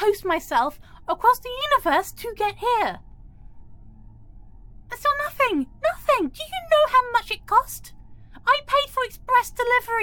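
Compressed frames skipped at 8.13 s: roughly two 23.2 ms frames go missing, so the audio jumps ahead by about 50 ms.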